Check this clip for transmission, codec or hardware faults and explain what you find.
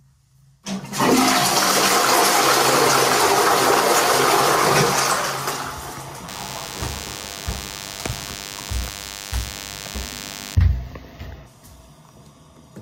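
Two faults are present: gain pumping across the whole recording, and a DECT cordless phone buzz from 6.28 s to 10.55 s.

Gain pumping runs throughout. The gain swings by roughly 5 dB. The likely cause is input gain set far too high, with a fast limiter or compressor clamping down on each peak and then releasing. The waveform looks flattened, with peaks pressed to a similar height.

The DECT cordless phone buzz starts at 6.28 s and stops at 10.55 s. A nearby cordless handset or base transmits a short radio burst every 10 ms. The audio circuitry rectifies that energy and turns it into a steady, thin buzz at 100 Hz, about 20 dB below the wanted sound. On a spectrogram it forms a comb of evenly spaced horizontal lines at 100 Hz and its many harmonics, present only in that span. A zoomed waveform shows a regular 10 ms ripple riding under the audio.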